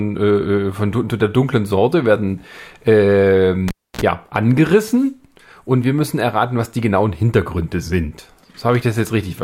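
At 3.68 s, just after "werden äh", a live cable is pulled and plugged in again. The break in the signal path pops, leaving 280 ms of near silence; then 47 ms of 60 Hz mains buzz as only the tip touches, and a second pop at 4.01 s as sound returns.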